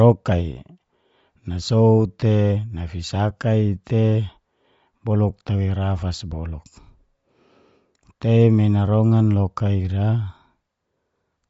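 It's a speech clip, and the whole thing carries plainly audible codec damage that sounds like Bluetooth LC3 compression, likely from an LE Audio link. Nothing comes through above about 7.6 kHz, and the top of what remains has that breathy, grainy texture you get when a transform codec zeroes upper bands and fills them with noise. The degree of damage fits a low rate of around 32 kbps with 10 ms frames.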